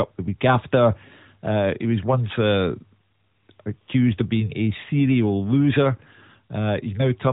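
No technical faults can be heard in this speech recording.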